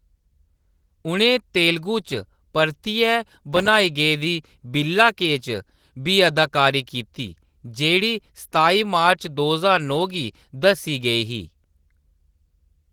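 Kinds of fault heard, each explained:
Opus voice compression: At about 16 kbps, hybrid coding leaves the speech plainly hoarse, with a coarse, faintly robotic edge throughout.
Processor overload crackle: From 3.53 to 3.80 s, missed deadlines on very short buffers leave brief silent gaps, heard as gritty crackle just before "गेदी बिल्ला के".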